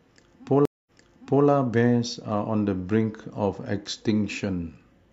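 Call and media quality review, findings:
Stream reconnect, 0.65–1.46 s. Audio drops out for about 207 ms, then speech resumes roughly 0.6 s earlier, repeating material. Probable component: streaming client/network layer. Mechanism: connection lost, player reconnected and started a fresh decoder mid-stream; server resent a backlog burst, so playback restarts behind the break point, first frame fades in.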